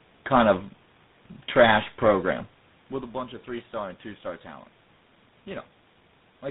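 Tandem speech coding runs through the whole speech clip. The sound is rough, muffled and warbly, with nothing above 3.8 kHz. That fits three speech codecs in a row, ending in GSM full rate, each re-coding the previous coder's already damaged output.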